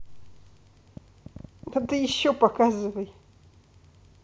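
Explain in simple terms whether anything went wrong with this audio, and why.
Yes, something went wrong. Most likely, interference from nearby equipment or a faulty connection or power supply pushed a short electrical pulse into the recording again and again. That produced a train of clicks from 0.97 to 2.11 s: around ten sharp ticks, close to ten per second but unevenly spaced, each about as loud as the speech itself. They sound like popping laid over the talking, unrelated to anything being said.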